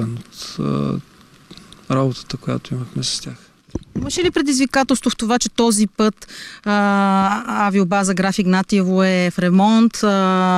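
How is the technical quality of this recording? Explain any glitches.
The technical quality of this recording holds up, with no glitches to explain.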